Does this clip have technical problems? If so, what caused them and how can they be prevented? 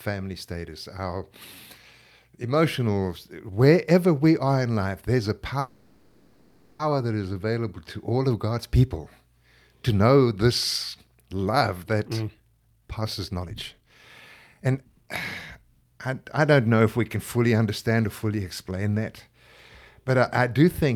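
Yes. From 5.59 to 6.82 s there is a call audio freeze: the last sound stretches into a fading buzz for 1.2 s, then speech resumes exactly where it stopped. Unlike a dropout, nothing is lost; the likely cause is delayed packets emptying the jitter buffer. Prioritising call traffic on the network prevents it.

Jitter buffer speed-up follows, at 131% speed from 12.03 to 15.10 s, trimming roughly a second, then at 108% from 15.55 to 18.72 s, trimming roughly a third of a second. The buffer cuts short pitch-period pieces to shed the backlog, so speech sounds hurried while its pitch stays the same, unlike simply playing it faster. Limiting how quickly the buffer is allowed to shrink prevents it.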